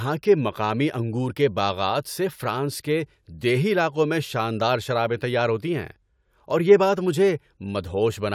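Nothing in this speech recording stands out as a technical fault; there are no dropouts, glitches or other problems to point to anywhere along the way.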